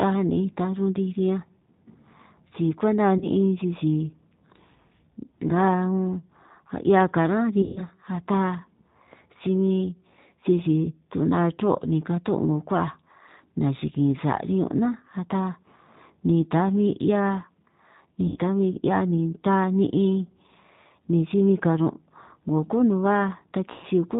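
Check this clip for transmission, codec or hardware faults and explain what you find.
Two faults are present: a G.729 codec throughout, and packet loss concealment at four points.

The G.729 codec damage is plainly audible across the whole clip. The speech is rebuilt from a vocal tract filter and a pitch predictor, with a few pulses per frame. That fits an 8 kbit/s stream. Nothing above 4 kHz survives, and the voice sounds rough and synthetic.

VoIP packet loss concealed by the speech codec occurs at 3.18 to 3.27 s, 7.62 to 7.85 s, 18.27 to 18.39 s and 23.72 to 23.86 s. The gaps are about 30, 140, 90 and 110 ms long. The decoder stretches its last pitch and filter with falling gain. Each gap turns into a fading buzzy tone or coloured noise, and the speech stays weak briefly afterwards.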